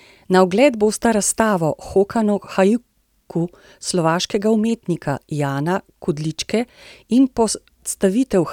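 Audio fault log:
No faults detected anywhere in this speech recording.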